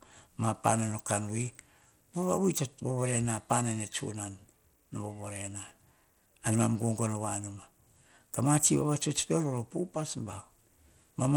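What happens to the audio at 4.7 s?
At 4.7 s, as throughout the clip, the speech carries Bluetooth SBC compression, likely from a starved SBC link at a rate near 96 kbps. Its coarsely quantised upper sub-bands make the treble flicker and lay gritty, aliased noise over the sound, with nothing above 20.7 kHz.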